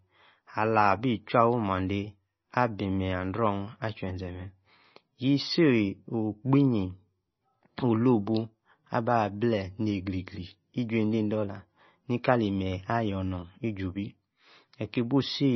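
From start to end the speech carries heavy MP3 compression damage, likely from a very low bitrate around 24 kbps. Nothing survives above 5.9 kHz, and weak frequency lines flicker between frames, giving a watery, swirly texture and chirpy s sounds that a simple low-pass filter would not produce.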